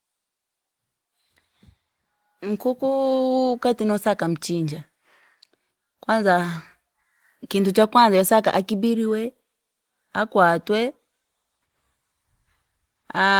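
No technical faults can be heard anywhere in this speech recording. There is nothing to place on the timeline.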